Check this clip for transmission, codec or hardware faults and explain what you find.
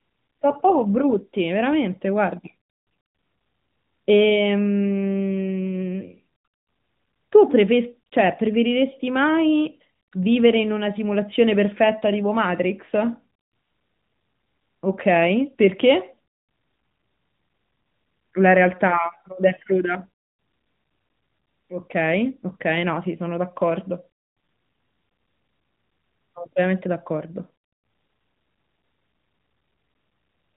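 No transmission, codec or hardware faults turn up in this speech: the narrowband bandwidth and light coding character of the AMR narrowband mobile codec are what a healthy call at its higher bit rate sounds like, with no dropouts, glitches or distortion anywhere in the signal.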